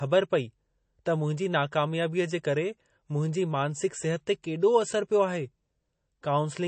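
Throughout the speech, the sound is watery and swirly, with nothing above about 8.3 kHz. This is likely MP3 compression at a low bitrate, dropping treble and weak detail.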